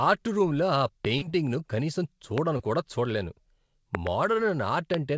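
At 1.05 s, just after "ఆర్ట్ రూమ్లో ఆ", a loud pop lands on the speech, peaking about 20 dB above it and lasting about 20 ms before the speech continues underneath. It is likely a voltage step or pulse from a plug, switch, static or driver glitch. On the waveform it appears as a tall, narrow spike. On the spectrogram it is a bright vertical stripe running through every frequency band.

From 1.18 to 1.23 s comes a short concealed packet loss. About 40 ms of audio never reached the decoder in time, and the receiver synthesised roughly 34 ms to cover the gap by extending the preceding sound, then blended back into the real signal. It is heard as a brief smear or wobble. On the spectrogram the harmonics flatten into a short, overly steady patch with a soft seam where the real audio resumes.

At 2.38 s a second single pop, again about 20 ms long and about 20 dB above the speech, comes right before "కూడా చూడలేను". 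It shows the same isolated spike on the waveform and full-height vertical line on the spectrogram.

From 2.57 to 2.61 s, still before "కూడా చూడలేను", a smaller concealed packet loss covers about 20 ms of missing audio with roughly 17 ms of extrapolated sound. It is heard as a brief smear or wobble. Because it is so short, the spectrogram shows only a sliver of smoothed, repeated texture.

Between 3.95 and 4.09 s there are two pops in quick succession, each about 20 dB above the speech. On the waveform they form a pair of separate spikes, and the spectrogram shows two bright vertical stripes. This is likely a switching transient that bounced or was shaped and repeated by the circuitry after it.

At 4.94 s a final single pop of about the same strength appears as one more narrow spike and vertical stripe. Throughout the clip, the spectrogram is empty above 8 kHz, consistent with the G.722 call codec.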